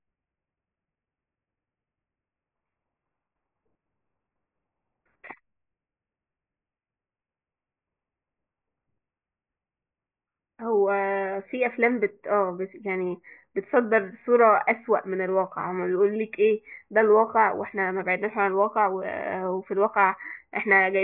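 Nothing in the speech stands out as a technical fault at any point, so there's nothing here to flag.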